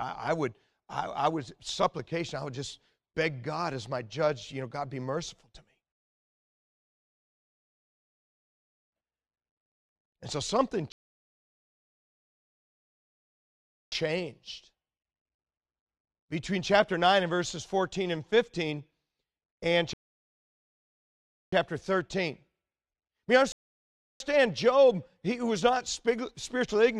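The speech stops dead four times for rebuffering stalls, with the player running dry and waiting for data: 5.92 to 8.92 s, 10.92 to 13.92 s after "so something", 19.93 to 21.52 s, and 23.52 to 24.20 s. Each resumes exactly where it paused, so nothing's lost, just roughly 8.3 s of silence added.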